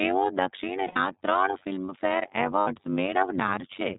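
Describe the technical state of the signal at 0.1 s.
At 0.1 s the speech carries overlap-add ripple, present across the whole clip. Frames were recombined with an overlap whose gain does not sum flat, so level swings by about 60 dB once per frame, around 100 times a second, heard as a metallic buzz with extra tones around each note.

The same moment also shows plainly audible iLBC codec damage, again running throughout. Each 30 ms frame's excitation is coded independently and nothing above 4 kHz survives, leaving the speech dull, slightly rough and synthetic, which fits iLBC's 13.33 kbps mode.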